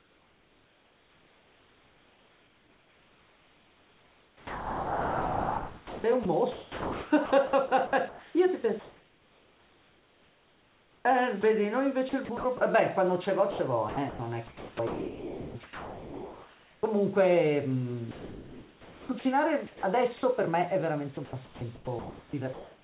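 Speech that turns choppy, with quiet stretches and word edges swapped for flat synthetic hiss, from 0.0 to 11.43, 12.09 to 12.61, 13.51 to 16.83, 18.11 to 20.23 and 21.15 to 22.83 s, most heavily in the first stretch, where about 9.4 s is replaced. This is likely sound chopped by the voice detector, which stops sending and fills the gaps with comfort noise. The audio has nothing above 4 kHz, which fits a G.711 call path.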